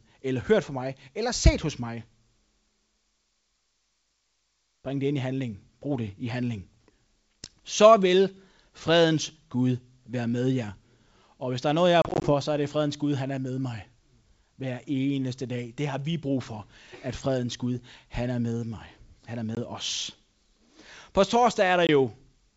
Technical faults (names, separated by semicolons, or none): packet loss on an ADPCM call